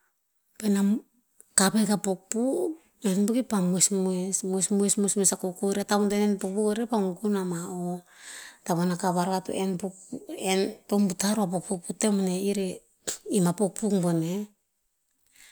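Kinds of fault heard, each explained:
No technical faults can be heard anywhere in this recording.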